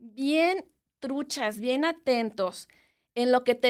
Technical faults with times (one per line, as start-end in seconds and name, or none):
0.43-2.01 call bitrate drop